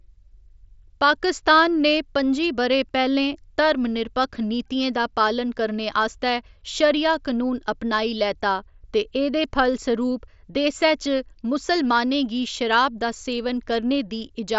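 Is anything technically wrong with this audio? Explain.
No, the speech carries no technical fault, and it sounds as expected for a Bluetooth mSBC headset link, with the band stopping near 7.7 kHz and the light graininess that codec adds on louder passages.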